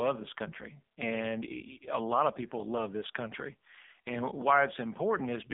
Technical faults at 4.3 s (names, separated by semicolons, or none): AMR narrowband mobile codec